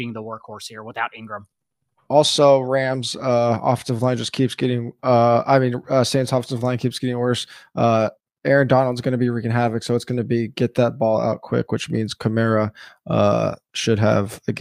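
Speech with no audible faults.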